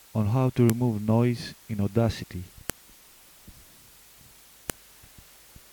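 Sharp, loud clicks at 0.70, 2.70 and 4.70 s, exactly 2.0 s apart, are a file header played as audio: each joined piece's header bytes decode as samples. The waveform shows a narrow spike at each join; the spectrogram shows a thin full-band vertical line.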